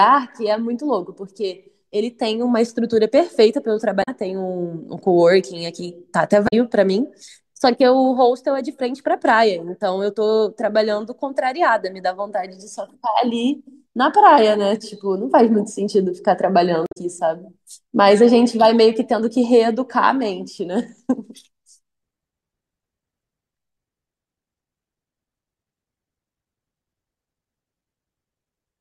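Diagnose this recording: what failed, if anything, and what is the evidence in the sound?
Damaged data in a compressed stream, at the codec stage: brief glitches at 4.00–4.09 s, 6.45–6.53 s and 16.84–16.97 s. Corrupt frames garble the decoder, which resyncs at the next header. Unlike network packet loss, which is concealed smoothly, these bursts are misdecoded or skipped frames.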